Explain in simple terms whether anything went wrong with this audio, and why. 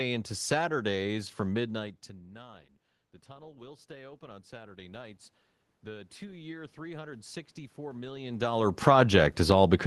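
Automatic gain rising happens twice, from 1.11 to 5.24 s and from 5.83 s to the end: the level control slowly turns up a quieter input, so the voice and room noise swell together.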